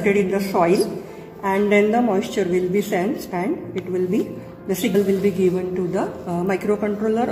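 At 3.29 s and again at 4.94 s, compressed frames are skipped: a few frames go missing, so the audio jumps ahead by roughly a tenth of a second. Each join shows as an abrupt spectral discontinuity and waveform mismatch.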